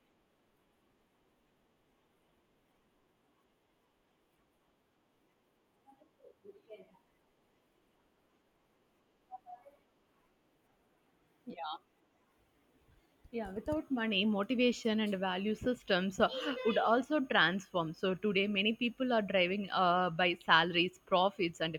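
Speech recording, and nothing is technically wrong with it.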